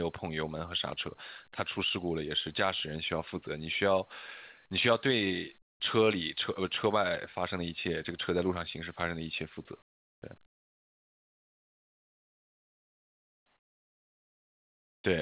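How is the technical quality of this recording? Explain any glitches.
The recording has narrowband call-path quality, with nothing above 4 kHz, consistent with a G.711-style telephone codec. It also has three stretches where the background is replaced.

Comfort noise in place of the background occurs at 5.62–5.8 s, 9.82–10.22 s and 10.46–15.04 s. In each pause, the natural background, which sits about 35 dB below the loud parts, gives way to a steady, featureless hiss that is about 11, 12 and 17 dB quieter respectively. The likely cause is discontinuous transmission: the sender's voice detector stopped sending during silence, and the receiver synthesised noise to fill the gap.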